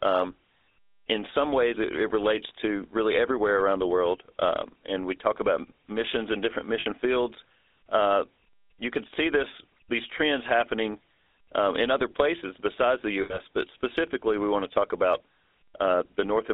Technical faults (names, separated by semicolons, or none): GSM full-rate codec; lost GSM frames